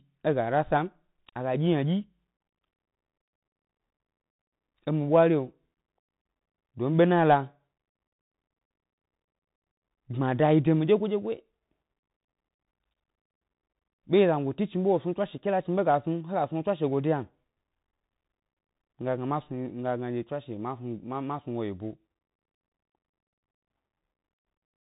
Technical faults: Bluetooth CVSD headset codec; unconcealed Bluetooth headset packet loss

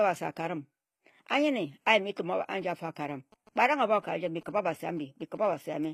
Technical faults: HE-AAC compression; GSM signalling bursts

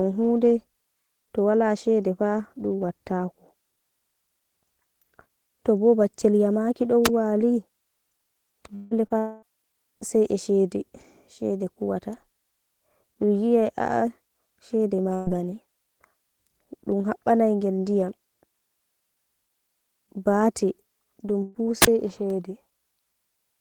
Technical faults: wireless microphone squelch dropout; long network dropout; short concealed packet loss; burst of packet loss

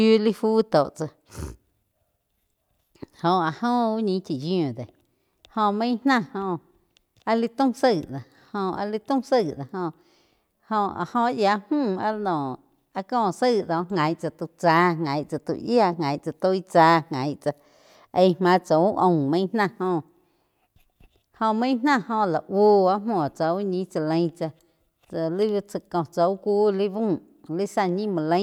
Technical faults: none

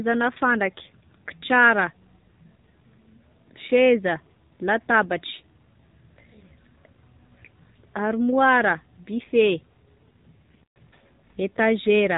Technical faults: AMR narrowband mobile codec

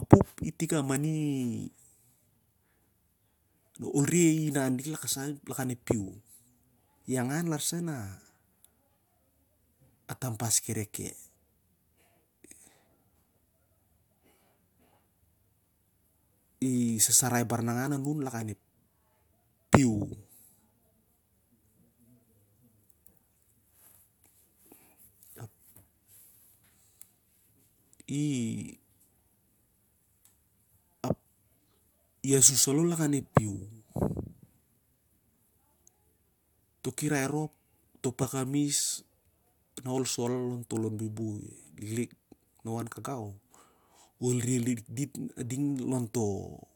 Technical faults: none

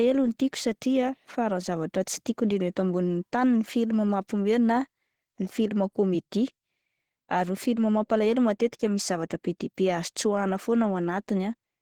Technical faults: Opus compression

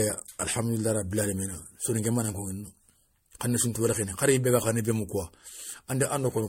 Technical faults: generation loss

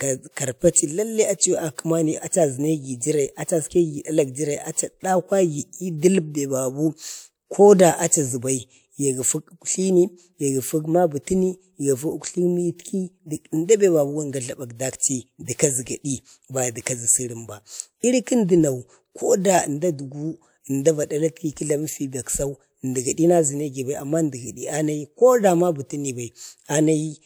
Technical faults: pre-echo

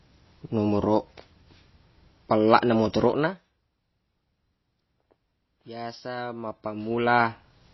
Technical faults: MP3 compression; zipper noise

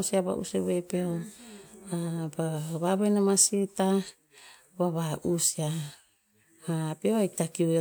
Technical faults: none

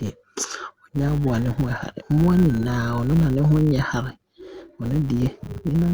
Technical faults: filter restarted on every block

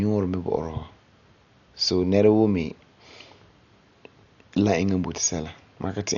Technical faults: Dolby Digital compression

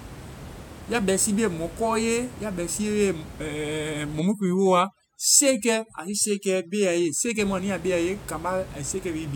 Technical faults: overdone noise removal

